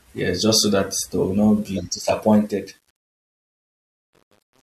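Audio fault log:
2.31–4.62 s, truncation distortion on a fade: after "they will not be", the fade-out's quiet tail steps coarsely without dither, fitting about 9-bit resolution, and turns gritty from 2.7 s.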